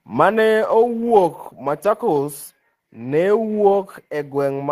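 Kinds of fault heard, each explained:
No faults can be heard in this speech clip.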